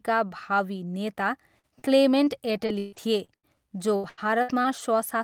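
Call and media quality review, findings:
Lost packet rebuilt from error correction, 1.21–1.23 s: one 20 ms packet dropped in transport and recovered from the Opus in-band FEC copy carried by the next packet. No gap, but that frame is rougher and noisier, with the low-bitrate copy audible as a brief coarse patch.

Short concealed packet loss, 1.59–1.65 s and 1.79–1.93 s: about 40 ms, then about 20 ms, missed the decoder's deadline. Receiver-side PLC extended the preceding signal to fill each hole, with a few ms of extra stretching around the second. The result is a short smear or wobble at each point before the real audio resumes.

Repeated packet loss (robotic sound), 2.24–3.57 s and 3.96–4.80 s: bursty network loss or late delivery. The first span has 6 gaps totalling 320 ms, with the longest at 140 ms and about a quarter of the span concealed, plus roughly 150 ms recovered from FEC. The second span has 4 gaps totalling 240 ms, with the longest at 83 ms, 28% concealed and roughly 70 ms from FEC. 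Back-to-back concealment makes the speech sound choppy, with pieces missing.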